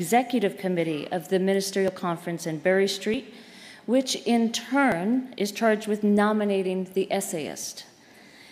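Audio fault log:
1.88, 3.14, 4.92, 5.84 and 7.64 s: dropped buffer (overrun). Each time the sound jumps slightly ahead, with no silence. Roughly 40 ms is lost at 1.88 s and 20 ms at the others. Likely cause: samples overwritten before being read, so the two sides join directly.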